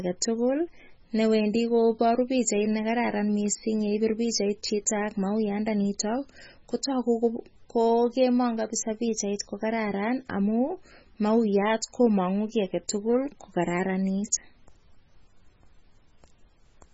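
A speech recording that was most likely squeezed through a heavily starved MP3 encoder, with the damage running the whole way through, which fits a very low bitrate around 16 kbps. With so few bits, the encoder discards everything above 7.7 kHz, leaving the sound dull and muffled, and drops the weakest frequency lines, which flicker in and out between frames. That flicker gives a watery, swirling texture, with metallic chirps on s sounds and smeared consonant attacks.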